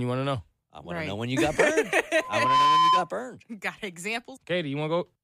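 Loudspeaker feedback squeal runs from 2.13 to 3.10 s, just after "when you got burned": the microphone re-amplifies its own loudspeaker, and a 1 kHz tone swells within about 0.4 s into a squeal roughly 10 dB above the speech.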